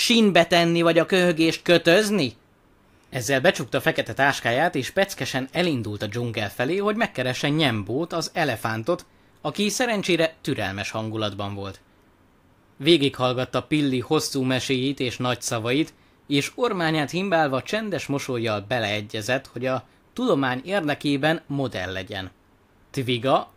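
Nothing in this recording of speech calls for comment, as there are no technical faults to be heard anywhere along the way.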